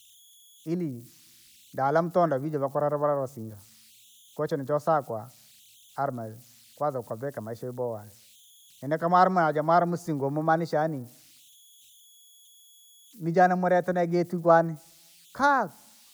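Converter idle tones run throughout this speech clip: a faint whistle somewhere near 3 kHz sits in the pauses, with grainy noise under quieter passages, about 32 dB below the signal. An undithered delta-sigma converter, given little input, cycles through repeating bit patterns that produce these tones.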